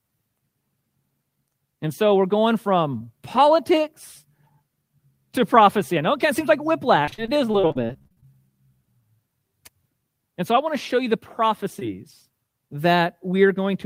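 From 7.05 to 8.27 s the speech turns choppy and robotic, with a stuttering edge and bits missing. This is repeated packet loss: more than a dozen short dropouts, the longest 42 ms, each patched by stretching the previous sound, concealing roughly a third of that stretch.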